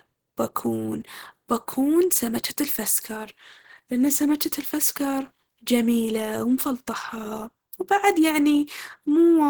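Throughout this speech clip the sound is hoarse, grainy and muffled, with plainly audible coding roughness, which points to likely Opus compression in its hybrid speech mode at a low rate around 16 kbps.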